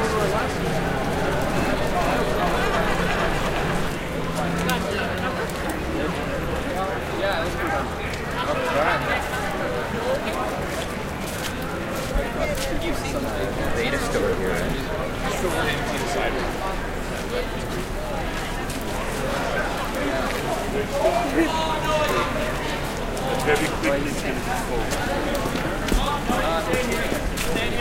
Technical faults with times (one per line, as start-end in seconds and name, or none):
0.00-3.88 doubled audio track